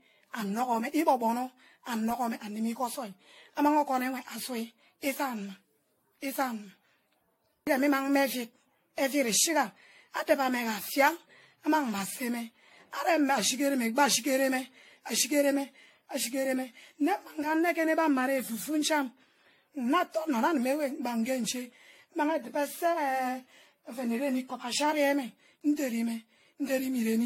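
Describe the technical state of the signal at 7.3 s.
Generation loss is present at 7.3 s, as it is across the whole recording. The speech sounds swirly and hollow, with smeared, softened onsets and no content above 16.6 kHz. This is likely the result of repeated lossy re-encoding, around seven passes, in a way that fits a 64 kbit/s AAC-LC chain. Each pass requantises on a shifted frame grid, so noise and spectral gaps compound beyond what a single encode at that rate would leave.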